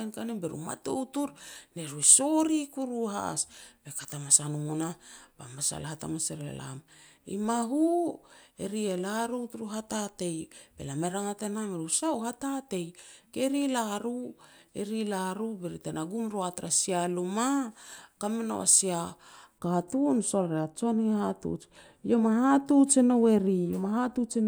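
From 19.58 s onward, de-emphasis applied wrongly tilts the treble down gently, about 11 dB at 10 kHz, muffling the speech without a lowpass filter's abrupt cutoff.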